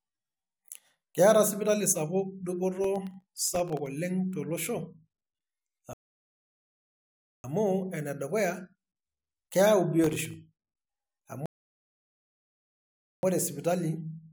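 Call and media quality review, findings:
Processor overload crackle, 2.75–3.86 s and 10.04–10.34 s: gritty tearing over the speech. Audio processing is missing its deadlines repeatedly. Each late buffer drops to a tiny silent gap, and the gaps point to buffers under a millisecond. The crackle clears as the load drops.

Rebuffering stall, 5.93–7.44 s and 11.46–13.23 s: playback cuts to silence, then resumes exactly where it stopped. The player's download buffer ran dry and waited for more data. No audio is lost, but these stalls add 1.5 s and 1.77 s.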